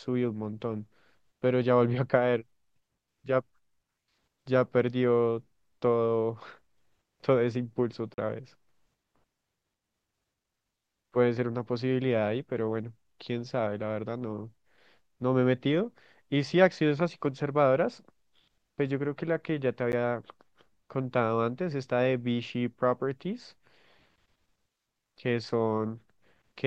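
At 8.14 to 8.18 s, a 40 ms block of digital silence cuts into the speech, leaving a short hole. At 19.92 s, a 10 ms block recurs, heard as a tick. Both point to samples zeroed when the output buffer went unfilled.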